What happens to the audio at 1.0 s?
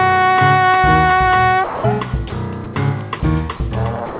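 Nothing goes wrong at 1.0 s: the sound carries on intact through the call path, which sounds like a G.711 mu-law connection at 64 kbps, with nothing above 4 kHz.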